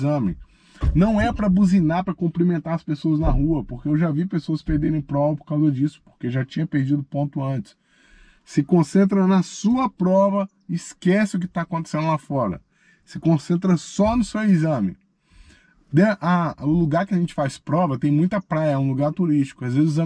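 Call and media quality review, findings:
No faults found in this audio. Nothing calls for follow-up on this ticket.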